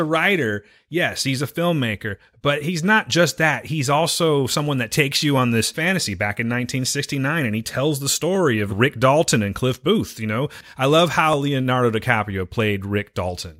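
From 0.91 s to 12.81 s, a click repeats every 1.49 s, about ten times, through the speech. These are clock drift buffer slips. The likely cause is two devices whose clocks differ by roughly 200 ppm. Each slip drops or repeats around fifteen samples.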